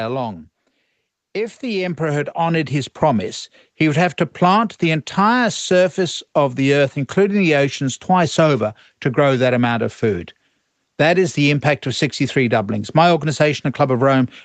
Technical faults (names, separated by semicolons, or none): automatic gain rising